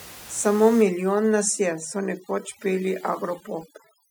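From 0.82 s to the end, the background in the gaps between phrases drops and breaks up into twinkling specks. This is overdone noise removal: a reduction stage set too strong is switching off frequency bands close to its noise estimate, taking quiet parts of the voice with them. Before it starts, the room noise sits about 20 dB below the speech.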